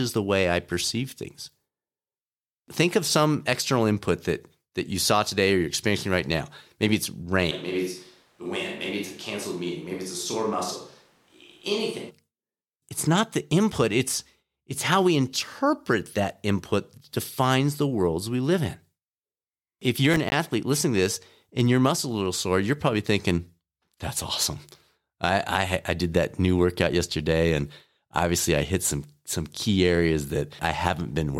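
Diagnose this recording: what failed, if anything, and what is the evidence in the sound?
Switch to a distant microphone, 7.53 to 12.09 s, at the capture stage. The speech abruptly turns roomy and hollow, loses bass, drops about 5 dB, and room noise rises to about 35 dB below the speech. The likely cause is the close microphone's feed dropping out, leaving only a farther one.

Processor overload crackle, 20.14 to 20.32 s, at the driver or buffer stage. A brief burst of gritty tearing rides on the speech. Around seven buffer deadlines were missed over that stretch, each leaving a hard-edged silent gap, which fits buffers of roughly 10 ms.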